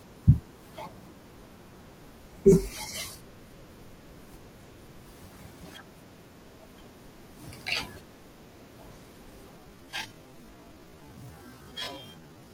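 Speech, with a time-stretched section from 9.54 s to the end at 12.53 s. At 9.54 s the pace drops abruptly to about 0.54 times normal speed, so each sound lasts nearly twice as long. The pitch does not fall with it. This likely comes from software lengthening the passage by repeating short slices of audio while keeping their pitch.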